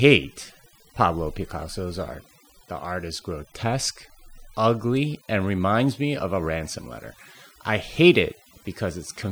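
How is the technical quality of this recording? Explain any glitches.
The recording is held back by one fault that runs through the whole clip. Overdone noise removal: a noise reducer set too aggressively cuts individual frequency bands near its noise estimate, leaving near-silent gaps with twinkling specks.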